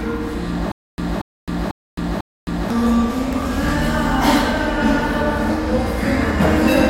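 From 0.72 s to 2.70 s the audio falls into a stutter with silent gaps. A 233 ms fragment plays, drops to digital silence for 264 ms, then returns unchanged, repeating four times on an even 497 ms cycle. The likely cause is a player or stream stall, with each retry replaying the last buffered fragment before running empty again. Whatever sound belonged in that span never arrives, so the clip lurches forward when playback resumes.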